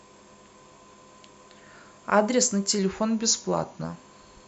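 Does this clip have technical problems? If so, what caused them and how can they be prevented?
Yes. From 2.79 to 3.84 s there is a drift correction step: software reconciling two device clocks likely changed the playback rate in a single jump to rebalance its buffer. The speech slows by about 5.6% and drops in pitch by roughly a semitone (about 99 cents) together, then snaps back to normal speed and pitch at 3.84 s, so the voice sounds briefly detuned and dragged. To prevent this, apply clock-drift correction through gradual, continuous resampling rather than abrupt rate changes.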